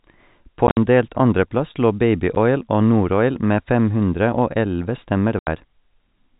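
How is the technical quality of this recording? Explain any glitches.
The recording has dropouts from packet loss filled with silence, heard through a telephone-band channel that cuts everything above 4 kHz, consistent with G.711 coding.

The holes come at 0.67 to 0.77 s, just before "delt andreplass lå", where 80 ms vanishes in pieces over 100 ms with the longest gap 60 ms; at 2.35 s, a brief 10 ms blink right after "delt andreplass lå"; and at 5.39 to 5.47 s, a solid 80 ms gap. Packets never arrived and the receiver played silence in their place, so the audio chops out abruptly. The gap sizes point to 10 ms packets.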